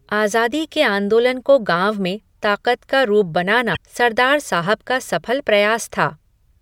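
At 3.72 s the speech is interrupted by damaged data in a compressed stream, lasting until 3.77 s, roughly 46 ms. Corrupted bytes in the encoded stream cause the decoder to misread those frames, lose sync and search for the next valid frame header, so a brief glitch stands in for the sound. A clean dropout would leave only silence, and concealed packet loss would sound smeared or repeated. This one is a decoding glitch instead.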